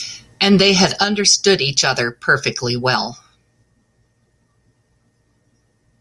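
No technical faults can be heard anywhere in this recording.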